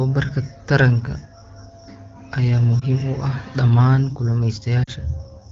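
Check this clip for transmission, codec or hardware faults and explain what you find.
Two short gaps in the speech come from lost AMR speech frames, at 2.80 to 2.84 s and 4.84 to 4.90 s. The first fits one lost 20 ms frame, and the second fits two, about 40 ms in all. The decoder fills each gap by repeating the last good pitch and vocal tract settings at falling gain. The single lost frame makes a brief dip or warble, and the two-frame run drops to near silence, not the hard silence or click of a plain dropout. The voice then returns a little weak.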